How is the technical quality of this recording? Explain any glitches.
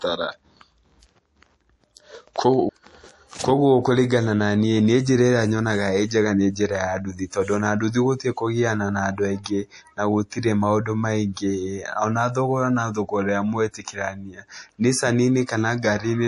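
The recording is speech carrying plainly audible codec damage for its full length, plus two brief pre-echo smears.

MP3 compression is the likely cause of the throughout damage. Nothing survives above 11.4 kHz, and weak frequency lines flicker between frames, giving a watery, swirly texture with metallic chirps on sibilants. That combination fits a low bitrate around 48 kbps, where the encoder discards treble and quiet detail to save bits.

Pre-echo appears at 9.44 to 9.46 s, spreading about 21 ms, and again at 10.30 s, about 18 ms. In each case a sharp attack sits late in a transform block, so quantisation noise sized for the loud onset leaks into the silence before it, producing a short hiss and a softened, smeared attack.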